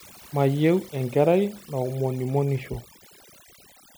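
A speech clip with overdone noise removal throughout: the background drops and breaks up into twinkling, warbling specks. Unlike a noise gate, which mutes everything between phrases, this strips individual frequency bands, eating quiet parts of the voice itself.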